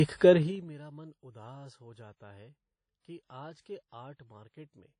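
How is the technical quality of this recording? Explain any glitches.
The recording has two audible problems: codec damage across the whole speech clip, and a stepped level drop near the start.

Throughout, the audio is plainly degraded by what is likely WMA compression. Nothing remains above about 10.1 kHz, and the sound rings and washes, with hiss that breathes along with the speech. Long transform blocks smear quantisation noise over tens of milliseconds, and the bitrate is low, around 32 kbps.

From 0.30 to 0.73 s there is zipper noise. The level falls by roughly 25 dB in unsmoothed 3 dB steps, about twenty per second. Each jump in gain leaves a small click, so a ticking, zipping texture rides on the speech while the level moves.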